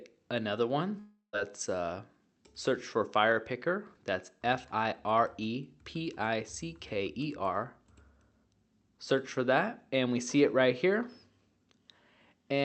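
At 0.99 s the sound smears into a fading buzz that holds for about a third of a second before dropping to near silence, then the audio resumes at 1.35 s with a piece missing. This is likely a long network dropout, with concealment filling the gap through the call codec's 8 kHz-limited band.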